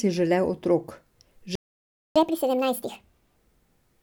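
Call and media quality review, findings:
Playback stall, 1.55–2.16 s: speech cuts to silence for about 0.6 s, then resumes. Likely buffer underrun or blocked playback thread starving the output.

Catch-up at higher speed, 2.16–3.36 s: speech runs 1.5x fast, pitch up roughly seven semitones. Player resampling its backlog to recover lost time, then back to normal rate.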